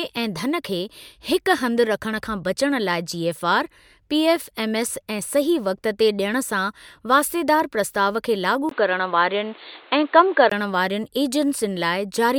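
At 8.69–10.52 s, likely an input switched to a poorer device: speech turns boxy after a 20 ms gap; spectrogram empty above 4.5 kHz.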